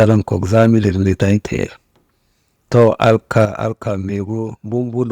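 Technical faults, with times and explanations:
0 to 0.17 s, 0.54 to 1.34 s and 2.75 to 3.44 s, microphone overload: The loudest peaks sound harsh and crackly. Their tops are flattened. The first burst is the worst, pushing about 7 dB past the limit, and a noticeable share of the waveform is squared off. The later two go about 4 dB over, with fewer flattened stretches. The likely cause is an input level set too high, so the converter runs out of range.
0.03 s and 3.45 s, microphone volume stepped down: The whole sound, voice and background together, drops abruptly in level. At 0.03 s the step is small, about 2 dB. At 3.45 s it is much larger, about 8 dB, and it comes right after the distorted stretch ends. The pattern suggests the call software is reacting to overload by lowering the device's input gain in a single step.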